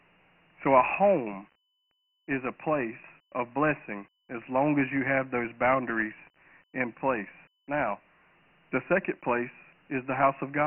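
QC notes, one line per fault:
Throughout: Dialogic VOX ADPCM. Nothing above 3 kHz, which fits 4-bit samples at 6,000 per second. Heavy coding damage leaves gritty hiss trailing the speech.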